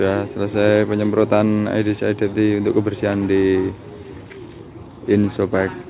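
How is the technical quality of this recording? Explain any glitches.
No glitches or faults audible.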